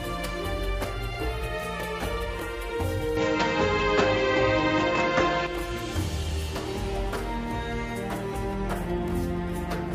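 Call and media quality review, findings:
Input switched to a poorer device, 3.17–5.47 s: nothing above 7.4 kHz, level shift about 5 dB, new noise floor about 50 dB down, no gap at either switch. Likely cause: capture path moved to a narrower-band microphone or headset call profile, then back.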